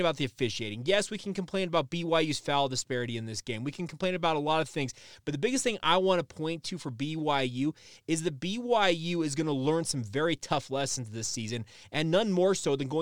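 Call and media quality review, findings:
Dropped samples, 5.68 s: a single sharp click in the speech, a thin vertical line across the spectrum. Only a couple of samples lost, a few hundredths of a millisecond, so the waveform jumps straight to a later value. The likely cause is a buffer handoff slip in the capture or playback path. Unlike packet loss or a dropout, no audible sound goes missing. Unlike crackle, it is one isolated event.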